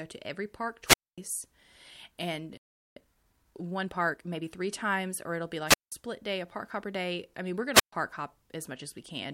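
At 0.85 s, just after "to every park", comes a wireless microphone squelch dropout. The radio link from an analogue FM microphone fades. Hiss rises briefly. Then the receiver's squelch shuts the output, leaving a hole of near silence for about 0.24 s. The speech comes back at 1.18 s.

At 2.57 s the speech stops dead in mid-flow. Nothing is heard for 0.39 s, until 2.96 s. This is likely a playback stall: the player ran short of data or its thread was held up, so it had nothing to output.

From 2.96 s to 4.50 s there is time-compressed catch-up. The player trims its backlog by cutting out small pieces and cross-fading across the gaps. The speech runs at 1.25 times normal speed. Pitch stays where it was. The result sounds hurried.

Two more squelch dropouts follow. At 5.66 s, after "times or it'll be", hiss rises and the output mutes for about 0.18 s. The speech resumes at 5.92 s with "day a park hopper". 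At 7.74 s, after "I mean we're going", the signal fades again. The output mutes for about 0.13 s before returning at 7.93 s. Each time the receiver is cutting out a weak radio signal rather than passing on its noise.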